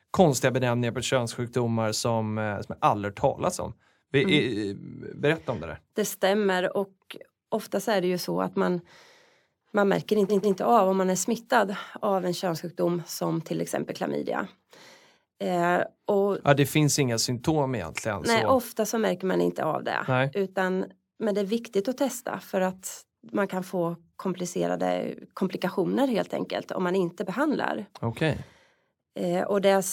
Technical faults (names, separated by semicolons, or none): repeated frames